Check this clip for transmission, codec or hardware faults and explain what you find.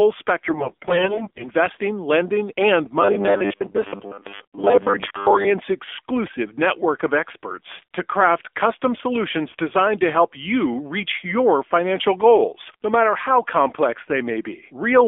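The clip shows two faults: narrowband mobile coding across the whole recording, and a burst of corrupted frames near the start.

AMR narrowband mobile codec, throughout: The speech has passed through AMR-NB. The band runs only from about 300 Hz to 3.5 kHz, so the top end is missing. The codec rebuilds the voice from a vocal-tract model excited by sparse pulses. At a low rate, which fits the 7.4 kbps mode, this leaves plainly audible damage: a buzzy, synthetic edge on voiced sounds.

AMR bit errors, 0.44 to 1.48 s, ending just before "lending and": For about a second, frames arrive with flipped bits in their weakly protected fields, at a heavy error rate of roughly 15 percent. The pulse positions driving the voice model are wrong, and the fine pitch, gain and spectral values are skewed. The voice keeps roughly its pitch and loudness but turns hoarse, scratchy and gargly until the words "lending and".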